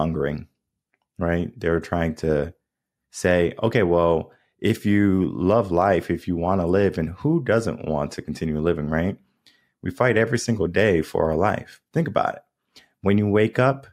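No technical faults can be heard anywhere in this speech recording.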